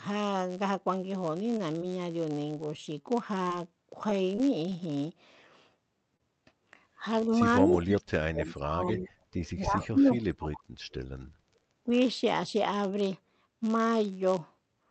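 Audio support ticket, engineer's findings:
Block size mismatch (padded), whole clip: an upstream stage writes shorter blocks than the next stage reads, and the remainder is zero-filled. Constant buzz at 91.5 Hz, the block rate. Playback runs slower by a factor of 0.996, pitch essentially unchanged.

Short stall from a late packet, 1.57 to 1.72 s: packet arrived late, jitter buffer ran dry. Receiver held the last sound for 18 ms, then resumed in place, with playout delay up 18 ms. Nothing lost, but a sound hangs slightly.

Short concealed packet loss, 1.78 to 1.83 s and 6.17 to 6.21 s: about 20 ms of audio never reached the decoder at each point. Decoder extrapolated the preceding sound over the hole, then crossfaded back. Heard as a brief smear, and a short sound may drop out.

Scattered short gaps, 2.77 to 4.73 s: about seven isolated packets lost or late, longest around 20 ms, roughly 5% of the stretch concealed. 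Each hole bridged by continuing the prior sound. Intermittent ticks and small hiccups over clear audio.

Speech suppressed in double talk, 7.00 to 9.13 s, 9.56 to 10.19 s, 11.86 to 11.93 s: near-end speech ducks and breaks up, deepest about 35 dB, about 25 dB and about 10 dB respectively. Likely the echo canceller misreading double talk as echo and attenuating both.

Echo leak, 7.70 to 7.82 s, 9.33 to 9.88 s, 10.21 to 10.59 s, 10.91 to 10.95 s: delayed copy of speech trailing 272 ms behind the original, at about 10, 20, 15 and 25 dB below the speech. Likely loudspeaker pickup not fully cancelled and returned.

Background gated by the echo canceller, 10.59 to 10.79 s: suppressor clamped the microphone hard during far-end playback. Room tone drops by about 17 dB for roughly 0.2 s, then returns once the canceller releases.

Call path through the Opus codec: audio band-limited at about 8 kHz, at 32 kbps.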